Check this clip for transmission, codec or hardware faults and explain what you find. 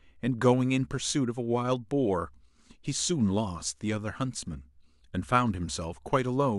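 One transmission fault is audible. Overlapping chunks occur from 2.22 to 2.24 s: the audio was handled in pieces about 2.5 s long, and the next piece began before the previous one had finished, so the join carries a duplicated slice. About 23 ms of speech is played twice back to back, which lands as a brief stutter.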